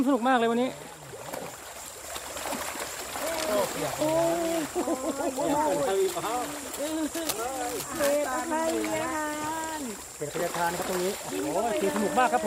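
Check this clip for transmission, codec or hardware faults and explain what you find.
Two kinds of fault are audible: three short dropouts from lost LE Audio frames, and two stretches of cable scratch noise.

Lost LE Audio frames: at 1.62 s, 3.99 s and 7.36 to 7.39 s, the sound briefly turns grainy and smeared. The gaps last 7.5 ms, 15 ms and 22.5 ms, which points to one, two and three consecutive 7.5 ms frames going missing. To fill each gap, the LC3 decoder repeated the last received spectrum with scrambled phase, so any tone briefly becomes a noisy wash. The losses here are too short for the fade toward silence to take hold.

Cable scratch noise: from 3.24 to 3.51 s, and again from 7.14 to 8.40 s, dense, irregular scratching and rustling sits over the sound, roughly 10 dB below it. The longer episode overlaps the 7.36 s dropout. The likely cause is a worn cable, connector or control being moved, so that its contact resistance flickers rapidly and injects crackling bursts into the signal path.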